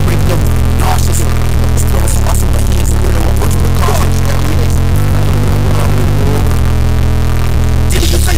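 A stuck bit, likely a broken data line or converter output holding one fairly high bit fixed, runs through the whole audio. About half the samples are off by a step near -10 dBFS, giving harsh, buzzy distortion throughout and loud noise filling the quiet gaps.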